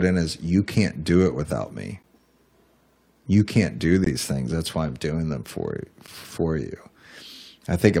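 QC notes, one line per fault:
2.03 s: gap between stream segments. A hard-edged hole of silence about 12 ms long cuts into the speech. Two-second segments' time stamps leave a gap the player fills with silence; nothing is lost.
4.04–4.06 s: gap between stream segments. A 20 ms silent dropout with abrupt edges at the next two-second boundary, where the segment timestamps leave another gap that the player fills.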